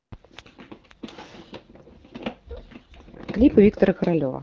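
No technical faults occur at any point in this speech; it comes through AMR wideband (HD Voice) coding at 12.65 kbit/s with only the light coloring expected at that rate.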